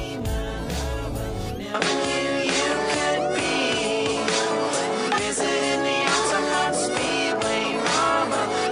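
From 1.74 s to the end the sound turns duller, with nothing above 10.2 kHz, a level shift of roughly 5 dB, and a faint new noise floor. On a spectrogram the top band cuts off sharply there. This is likely an input switched to a poorer device.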